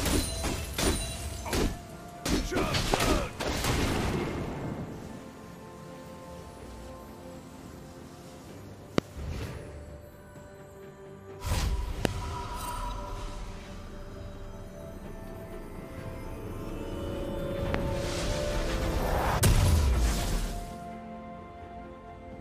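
Sharp, single loud pops cut through the sound at 2.94–2.96, 8.98–9.00, 12.05–12.07 and 17.74–17.77 s, each roughly 25 dB above the audio, which continues underneath. These are loud pops, likely from a brief voltage pulse, such as static or a switching glitch, entering the signal chain.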